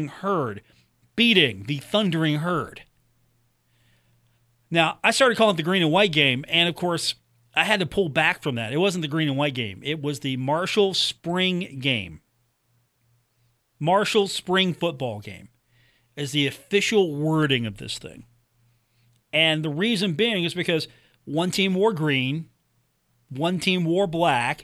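Listening to this speech recording, nothing stood out as a technical problem at any point.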